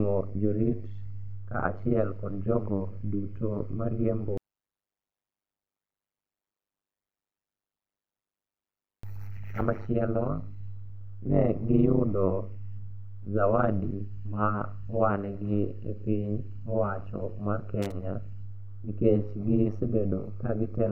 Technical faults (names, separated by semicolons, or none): overlap-add ripple; loose connector crackle